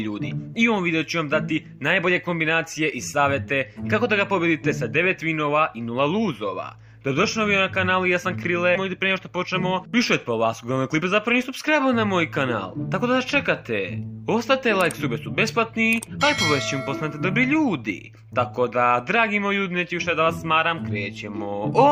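At 8.75 s the audio has a skip ahead. Roughly 0.7 s of material never reaches the output, and playback jumps straight to later audio with no gap or fill between the two sides. The cut is abrupt and the two sides are joined almost directly, so what stands out is the discontinuity: the sound before and after the jump don't belong together. It points to a burst of audio lost in transit or discarded when the receiver's buffer overflowed while newer audio was already waiting.

From 8.89 s to 11.02 s a jitter buffer speed-up follows. The receiver was holding more audio than its target, and to shed that excess delay it repeatedly cut out short slices about one or a few pitch periods long. Playback runs at about 108 % of normal speed for just over two seconds, with pitch unchanged, and around 0.2 s is removed in total. The passage sounds slightly hurried and compressed in time, then settles back to normal pace after 11.02 s.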